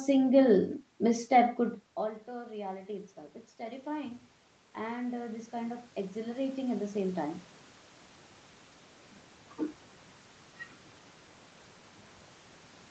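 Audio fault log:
3.56–7.45 s automatic gain rising: The input dropped by about 19 dB. The gain control slowly added about 10 dB. Voice and background noise swell together.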